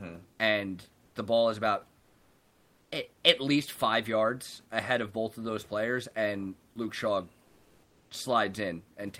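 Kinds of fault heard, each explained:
Sound dropped by the voice detector: Around 1.05 to 1.15 s, right before "ball is about", roughly 100 ms of the speech gets swapped for flat noise, so about 90 ms of real sound just vanishes. What's likely happening is the sender's voice detector, probably Opus DTX, deciding that quiet stretch was background and going silent until speech kicked it back on.
Comfort noise in place of the background: From about 1.99 to 2.91 s, between "ball is about" and "at at least five", the real room noise (sitting around 36 dB under the speech) gives way to a smooth, featureless hiss for roughly 920 ms. That's likely the receiver filling a DTX pause with synthetic noise, and it comes in about 3 dB quieter than the actual background, so you can hear the texture flatten and dip.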